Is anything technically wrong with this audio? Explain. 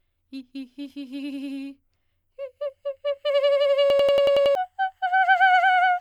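Yes. From 3.90 to 4.55 s the music has a system hang loop: the system stalled while the audio hardware kept replaying one ring buffer. A 93 ms slice, which fits a 4096-sample buffer, repeats seven times at 10.8 Hz as a machine-gun stutter, dropping about 0.7 s of music.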